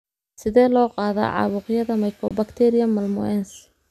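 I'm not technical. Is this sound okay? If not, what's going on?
No. At 2.28 to 2.31 s, right after "loo qaadaa caabuqyada", there is a digital broadcast dropout. The speech briefly goes silent, which fits one lost frame of signal.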